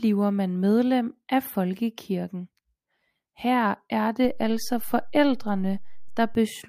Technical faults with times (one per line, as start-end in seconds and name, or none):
4.25-6.35 DC step